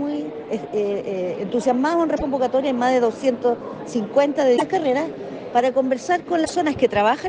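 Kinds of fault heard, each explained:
Broken MP3 bit reservoir: three short glitches, at 2.16 to 2.22 s, 4.56 to 4.62 s and 6.44 to 6.51 s, each about two or three frames long, which fits MP3 frames of roughly 26 ms. The sound jumps ahead and the first frames come out as a chirp, a burst of noise or a short hole. The likely cause is missing frames: the frame after each gap reaches back into the bit reservoir for data that was stored in the lost frames, finds the wrong bytes, and decodes them as nonsense until the stream recovers.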